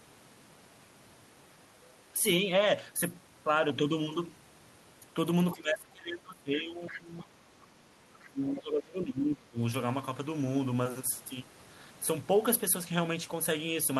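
Speech, with two stretches where the talker's level sinks hard: from 5.52 to 7.87 s and again from 8.13 to 9.59 s, it falls by something like 20 dB at its deepest, over roughly two seconds and then a second and a half. This is speech suppressed in double talk, likely an echo canceller that could not separate the talker from the far end and turned both down. It differs from packet-loss dropouts because the level is pulled down and chopped in uneven pieces rather than broken by clean, evenly short gaps. Inside the first stretch, at 6.89 to 7.0 s, a brief scrap of the other side's voice leaking through can be heard, roughly 15 dB below the talker and likely residual loudspeaker echo the canceller failed to remove. Unlike room reverberation, it is a separate voice that does not follow the talker's own sound.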